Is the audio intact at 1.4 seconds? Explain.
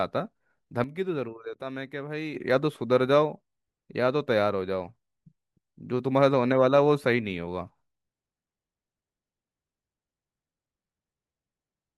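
No. At 1.4 seconds the speech sits inside a sudden gain jump running from 0.84 to 2.35 s, where the level drops by about 9 dB in a single step and returns just as abruptly. The speech and the background noise fall together, so the whole sound seems to pull back. The likely cause is a gain change applied without a ramp. On a waveform the envelope steps down to a narrower band between those two times, and a spectrogram shows a uniformly dimmer block with sharp vertical edges.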